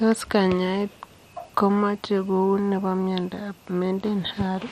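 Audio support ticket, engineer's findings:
Speech dull and gurgling throughout, granular distortion. Likely MP2 compression at a low rate, consistent with about 64 kbps. Sub-band bit starvation: upper bands switched off or coarsely quantised. Spectrogram: hard ceiling near 14.8 kHz, high bands flickering on and off in blocky patches.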